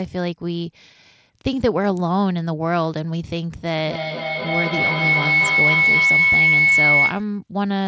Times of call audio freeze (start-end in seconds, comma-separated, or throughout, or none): none